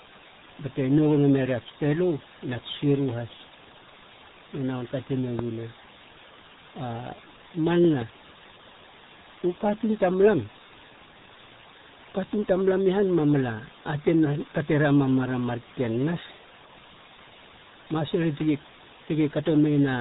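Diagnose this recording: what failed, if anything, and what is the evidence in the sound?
A steady, even hiss sits under the speech from start to finish, loud enough to be only about 15 dB below it, yet with no crackle or harsh distortion riding on the louder syllables. That points to low bit depth with dither at the sample-format conversion stage. The signal was requantised to very few levels, which fits 6-bit samples, and random dither added before rounding turned the coarse error into constant white noise rather than signal-dependent grit.

The speech is also muffled and gargly throughout, with a watery, bubbling texture on every phrase and no content at all above 3.8 kHz. This is heavy damage from the RealAudio 14.4 codec, the RealAudio 1 speech coder built for dial-up modems, at the codec stage. Its narrow band removes all upper-frequency detail, and its coarse modelling of the voice at a rate that fits an 8 kbit/s stream smears formants into that gargling sound.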